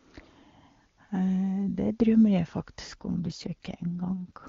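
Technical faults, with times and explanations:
2.87 s to the end, AMR rate drop: the speech abruptly turns rougher and more synthetic, with a raspy, buzzy edge, while the bandwidth stays the same and there is no gap or dropout. The sound fits the wideband HD Voice codec falling from its top rate, around 23.85 kbit/s, where the earlier speech is clean, to around 8.85 kbit/s. Far fewer bits remain to model the voice, so the vocal detail coarsens. The rate does not recover before the clip ends.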